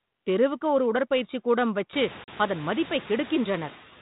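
Throughout this speech recording the background noise dips between phrases and swells back under the talker. These are noise suppressor artifacts: the suppressor pulls down every band it judges to be steady noise, frame by frame, by only about 5 dB. The effect becomes easier to hear once the room noise climbs by about 23 dB at around 2 s, settling roughly 19 dB below the speech. From 2.24 to 2.29 s, right after "ஒரு உடற்பயிற்சி கூடங்கள் வைச்சு", a hard-edged 40 ms hole opens, and the speech returns at "அதன் மதிப்பை" slightly distorted. This is packet loss on an ADPCM call: a couple of lost packets were filled with silence, and the decoder's adaptive predictor and step size drifted from the sender's until they resynchronised. The light coding grain and the ceiling near 4 kHz point to G.726 at 32 kbit/s.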